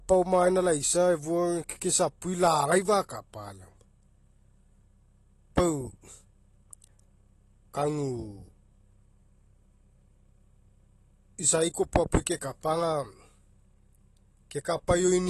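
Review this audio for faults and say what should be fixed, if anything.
Across the whole speech recording the sound is dull and smeared, with a warbling, fizzy edge on sibilants and nothing at all above 12.1 kHz. This is plainly audible AAC compression, likely AAC-LC at a low rate, which fits roughly 32 kbps. With so few bits, the encoder lowers its cut-off and quantises the remaining frequency lines coarsely, so detail smears across each frame. To prevent it, record or export to a lossless format, or encode AAC at a much higher bitrate.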